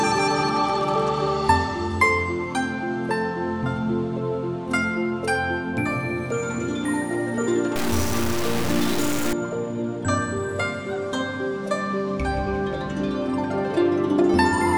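From 7.76 to 9.33 s the audio was likely truncated without dither, a low bit depth fault consistent with about 4 bits. With so few steps the rounding error follows the signal at nearly its own level, so that stretch turns to grainy distortion or near-steady hiss.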